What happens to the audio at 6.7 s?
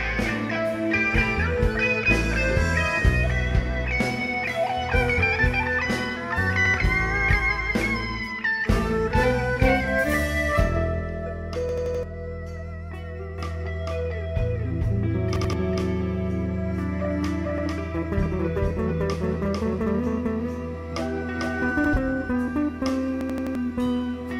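At 6.66 s a repeated buffer occurs, lasting until 6.74 s: new audio arrived late, so the device replayed the block it had just played, once. That block is about 85 ms long, which fits a 4096-sample buffer, and the audio jumps back with a hard join, heard as a short stutter. Unlike a dropout, there is no gap of silence; the same material sounds twice, and the timeline slips by roughly a tenth of a second.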